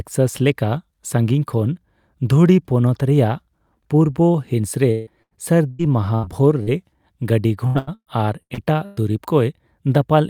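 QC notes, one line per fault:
4.91–5.09 s, long network dropout: For about 0.18 s the audio stops moving forward and the last sound is held and stretched into a buzz that thins toward hiss, with no true silence. About 0.15 s of fill stands in for roughly 0.16 s of audio that never plays, so the sound jumps ahead when it resumes. The likely cause is a stall in delivery. On a spectrogram, frozen harmonics smear horizontally and fade, then cut abruptly to new content; the waveform envelope decays smoothly, then snaps back.
5.22–5.34 s, 5.71–5.82 s and 6.15–6.26 s, burst of packet loss: Three near-identical gaps, each about 80 ms of audio lost and bridged by about 80 ms of synthetic continuation. The receiver repeats the last sound while turning it down, giving a brief held buzz or hiss and then a skip forward. On a spectrogram each shows as a short band of flat, repeated harmonics or diffuse noise fading out, then a hard edge where real audio returns. 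The waveform shows a tapering, periodic-looking patch.
6.63–6.70 s, short concealed packet loss: About 40 ms failed to arrive in time and was filled by extending the preceding sound, then crossfaded back into the real signal. It is heard as a quick smear or wobble rather than a clear gap, and the 40 ms of original audio is simply absent. On a spectrogram, look for a thin vertical strip where formants go briefly static or blurred. The waveform shows a small, overly regular segment with a soft join on each side.
7.67–9.00 s, repeated packet loss (robotic sound): Across about 1.3 s there are six separate holes, together about 0.5 s of fill replacing roughly 0.52 s of lost audio, so 38 percent of this stretch is synthetic. The longest hole is about 114 ms. Patches follow each other so closely that the sound turns choppy, with fragments missing. On a spectrogram this appears as alternating bands of frozen, comb-like harmonics and normal texture; the waveform shows a stuttering envelope with repeated, look-alike cycles.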